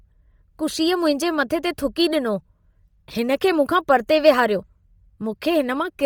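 Throughout the speech, the upper spectrum turns breathy and grainy, which points to heavy Bluetooth LC3 compression as the likely cause, fitting a low setting near 32 kbps with 10 ms frames. Unlike a plain low-pass, the band still reaches about 20.2 kHz, but much of the top is noise-filled rather than real detail.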